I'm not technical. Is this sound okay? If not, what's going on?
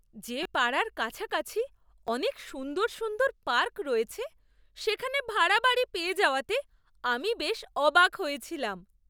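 No. Repeated buffers cause brief buzzy clicks in the speech at 0.43–0.45 s, 2.07 s and 4.10 s. Each is a tiny slice replayed, not a silent gap like a dropout.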